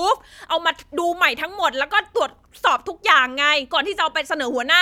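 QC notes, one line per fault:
Nothing stood out on listening to this speech recording.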